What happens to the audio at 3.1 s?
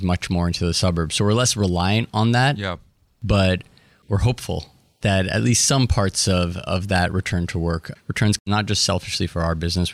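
Nothing goes wrong at 3.1 s; the speech carries on cleanly through that moment with no audible fault.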